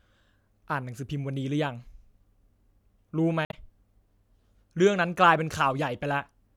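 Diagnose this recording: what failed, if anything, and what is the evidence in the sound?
Damaged data in a compressed stream at 3.44 to 3.54 s in this speech: a brief glitch adds about 9 ms to the timeline. At the codec stage, corrupted bytes made the decoder misread frames, lose sync and hunt for the next valid frame header.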